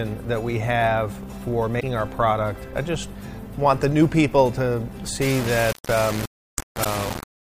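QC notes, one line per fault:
1.77 to 1.83 s and 6.81 to 6.86 s: damaged data in a compressed stream. Corrupt frames make the decoder lose sync and hunt for the next header, giving a brief glitch at each.
5.22 s to end: low bit depth without dither. Error that tracks the level, likely from rounding to about 4 bits, with error only around 10 dB below the signal.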